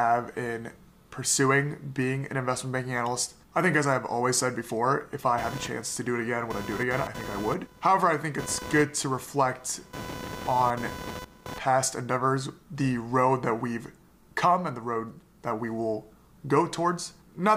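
Computer activity noise runs from 5.38 to 11.58 s: a buzzy chirp near 500 Hz, about 15 dB below the sound, from computer load disturbing the shared audio ground.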